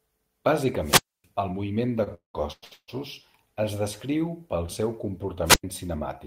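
From 0.80 to 1.27 s a wireless microphone squelch dropout occurs: the FM signal fades, hiss rises, and the receiver's squelch mutes the output for about 271 ms before the speech returns on "el moviment de". The same fault recurs from 5.45 to 5.64 s, just after "pel seu", with a shorter mute of about 98 ms.

Between 2.03 and 2.90 s, following "el moviment de", repeated stalls (stutter) appear. Packets arrived late, so the jitter buffer ran dry five times and the receiver stretched the last sound to cover about 545 ms in total, the longest wait 196 ms. Nothing is lost, but the speech drags and stutters.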